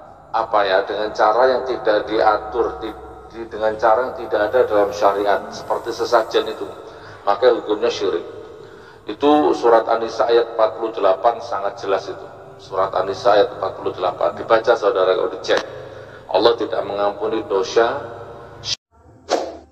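Nothing stood out on listening to the clip.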